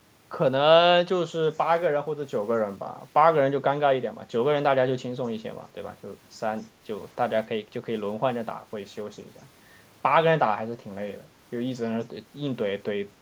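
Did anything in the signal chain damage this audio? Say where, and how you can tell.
Yes. At 6.61 to 6.66 s a very faint delayed copy of the speech, lagging by about 259 ms and roughly 40 dB below it, leaks in. This echo leak points to call processing, likely a far-end echo canceller failing to fully subtract its loudspeaker pickup.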